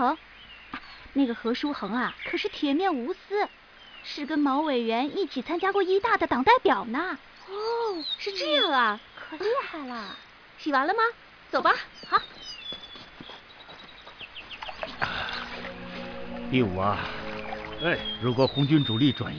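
No technical faults can be heard anywhere in the audio.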